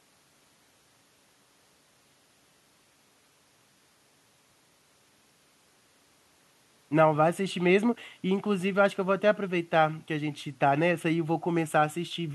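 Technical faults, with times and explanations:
Nothing technical stands out here; the speech comes across without any glitch, dropout or distortion worth flagging.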